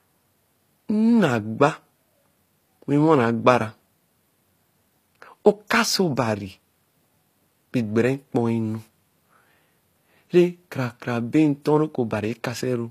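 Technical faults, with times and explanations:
Throughout, HE-AAC compression: the codec damage is plainly audible, with s sounds turning gritty, lispy and metallic, and nothing at all above 14.9 kHz. The likely cause is HE-AAC at a low bitrate, consistent with around 24 kbps, where only the lower spectrum is truly coded and the treble is rebuilt by copying lower bands upward under a coarse envelope. That rebuilt treble reaches high, but its harmonics don't match the real ones, which causes the grit.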